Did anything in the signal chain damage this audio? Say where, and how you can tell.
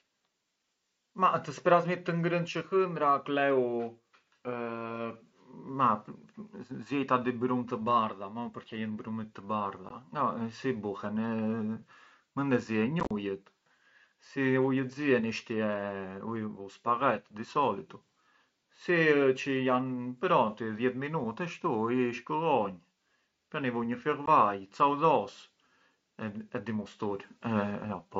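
Yes, in the Bluetooth link between headset and phone: unconcealed Bluetooth headset packet loss. Short holes with hard edges appear at 9.89 s and 24.26 s, each about 15 ms, which fits two lost frames. From 13.0 to 13.11 s the gaps scatter over roughly 105 ms, with the longest run 37.5 ms, giving a chopped, crackly stretch. On a waveform these are flat dropouts with square edges. On a spectrogram they show as vertical blank slices. Nothing fills the missing audio.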